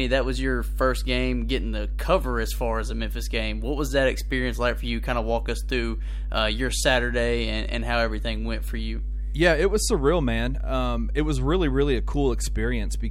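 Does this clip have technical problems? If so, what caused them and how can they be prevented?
Yes. Mains hum runs through the whole clip: a steady 50 Hz tone with low harmonics, roughly as loud as the speech itself. A ground loop or a nearby transformer let the power line leak into the signal path. Prevent it with a single grounding point, balanced cables, and distance from transformers.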